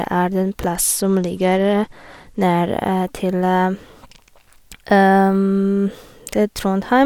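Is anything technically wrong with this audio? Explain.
Yes. From 0.67 to 2.43 s, just after "er den", there is a Bluetooth SBC bit pool drop. The sound points to the bit pool falling from about 28 to 13 (around 102 kbps), starving the upper sub-bands. The treble dulls and gritty quantisation noise rises, which a plain low-pass would not add, then clears when the rate recovers.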